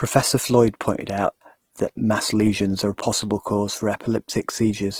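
From start to end, the speech sounds rough and grainy, with a noisy haze on its tones. This is likely Opus compression in its music mode. Starved bands get refilled with noise instead of dropping out. The damage fits a rate near 16 kbps. Content reaches about 20.4 kHz.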